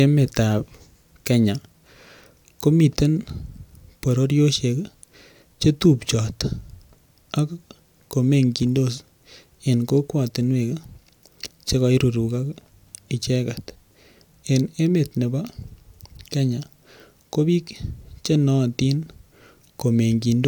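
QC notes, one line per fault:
No technical faults are present anywhere in the signal.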